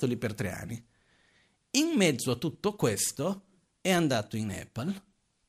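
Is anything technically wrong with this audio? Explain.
No, nothing is technically wrong with this audio.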